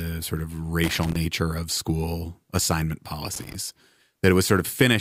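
A speech recording with two bursts of loose connector crackle. The first runs from 0.84 to 1.16 s, between "sort of" and "of school assignment". The second runs from 3.34 to 3.55 s, just after "of school assignment". Each is an irregular spray of crackle and scratching. A worn or dirty contact is making and breaking as it shifts. That chops the signal on and off, and any DC on the line turns each break into a click.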